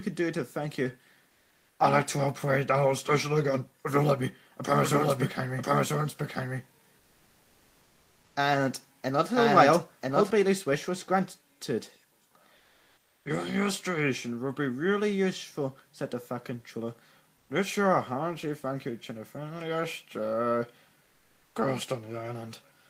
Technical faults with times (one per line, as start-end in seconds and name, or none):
1.33-1.69 comfort noise in place of the background
4.82-10.30 doubled audio track
7.03-8.35 comfort noise in place of the background
12.61-13.21 comfort noise in place of the background
21.07-21.55 comfort noise in place of the background